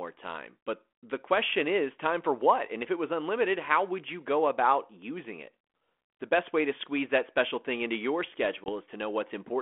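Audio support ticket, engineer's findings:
Packet loss on an ADPCM call, 8.64 to 8.70 s. A hard-edged 20 ms hole of silence, about one packet. The G.726 decoder's adaptive predictor and step size drift out of step with the sender's, so speech resumes slightly distorted, then resyncs within tens of ms. The 32 kbit/s path carries light codec grit in a 250 Hz to 3.4 kHz band.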